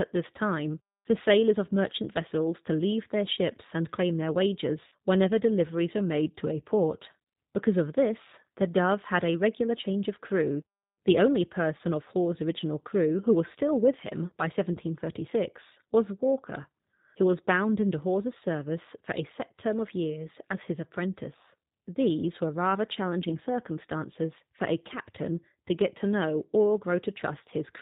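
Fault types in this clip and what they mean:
G.729 codec: an 8 kbit/s VoIP speech coder that rebuilds the voice from a vocal tract model, a pitch predictor and a few sparse pulses per frame. Here the damage is plainly audible, with nothing above 4 kHz and a rough, slightly synthetic edge on every syllable.
VoIP packet loss concealed by the speech codec: when packets go missing, the decoder keeps guessing from its last pitch and filter settings while fading the level. You hear brief stretched, fading smears after "ships and claim their" at 4.88 s (about 40 ms lost), after "still with him by" at 14.73 s, and after "were rather" at 23.29 s (about 20 ms each).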